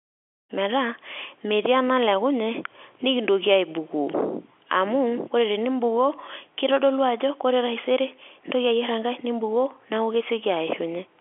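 No technical faults present.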